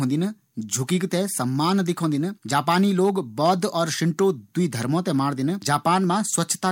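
Nothing to flag here: the speech runs along without any audible glitch, dropout or distortion anywhere in the recording.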